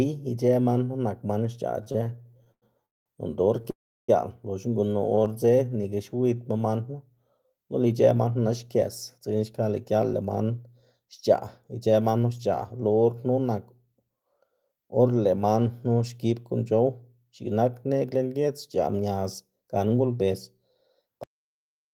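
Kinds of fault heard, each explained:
Repeated stalls (stutter): packets kept arriving late, so the jitter buffer emptied over and over and the receiver held the last sound each time. After "man knu nak man", 1.83 to 3.08 s holds 12 gaps, 483 ms filled, longest 199 ms, about 39% of the span, with a further four brief gaps from 5.15 to 5.28 s.
Short stall from a late packet: one packet missed its slot at 3.62 to 3.66 s, the buffer ran dry, and the receiver stretched the last sound for 26 ms before resuming where it left off, leaving a briefly held sound with a slight buzz or dip.
Call audio freeze: after "noꞌnda or", from 3.70 to 4.10 s, the sound is held as a fading tail and then drops to silence for 330 ms before "loxna gunu" resumes. The likely cause is packets held up on the way, emptying the buffer for 380 ms.
Jitter buffer slow-down: with the buffer running low, the receiver repeated single pitch periods to build reserve. 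Between "loxna gunu" and "man knu", 5.09 to 6.35 s plays at 90% speed, adding 139 ms, so sounds drag and draw out without a pitch change.
Jitter buffer speed-up: with too much audio queued, the receiver cut short pitch-period pieces to shrink the delay. From 8.15 to 11.35 s the sound runs at 107% speed, losing about 200 ms, then 11.79 to 12.79 s at 111%, losing about 100 ms, sounding hurried.
Cut-off end: the final buffers were never played, so at 21.24 s the sound stops mid-flow and drops straight into digital silence with no decay, an abrupt ending rather than a natural fade or pause.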